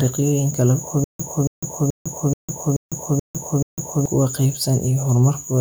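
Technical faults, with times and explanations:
1.04 to 4.06 s, stutter with silent gaps: a 278 ms scrap of speech repeats seven times, each followed by 153 ms of dead digital silence, so it pulses every 431 ms. Likely a stalled stream replaying its last fragment on each retry. The speech for that stretch is lost.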